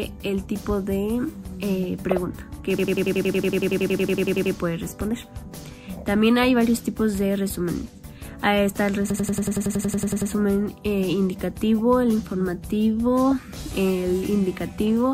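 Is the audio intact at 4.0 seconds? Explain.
No. At 4.0 s the audio is inside a system hang loop running from 2.79 to 4.55 s. The playback system froze while the sound hardware kept cycling one stored chunk. A 92.9 ms piece, which fits a 4096-sample buffer, repeats 19 times at 10.8 Hz, giving a rapid machine-gun stutter. The waveform shows identical blocks tiled end to end, and the spectrogram shows the same slice repeating every 93 ms.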